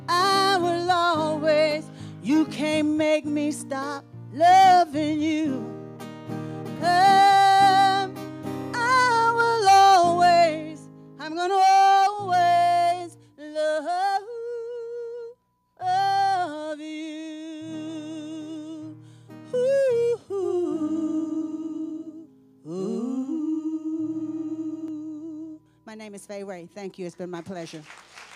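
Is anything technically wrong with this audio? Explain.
Yes. From 20.42 to 24.88 s the sound is doubled: an equally loud, dry copy trails roughly 150 ms behind and cuts in and out abruptly, most likely a second, slower capture path mixed in as a doubled audio track.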